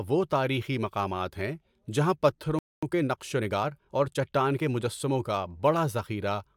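A speech clip in which the sound cuts to silence just after "تاریخی مقامات ہیں جہاں", from 2.59 to 2.83 s. That playback stall lasts about 0.24 s, likely because the player ran out of buffered data or its thread was blocked. From 2.83 to 5.19 s a time-compressed catch-up follows: the speech runs about 1.1 times fast to clear the backlog, but its pitch stays normal, unlike a simple speed-up that would raise it.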